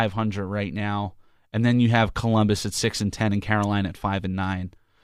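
No technical faults occur at any point in the audio, so there is nothing to describe in time order.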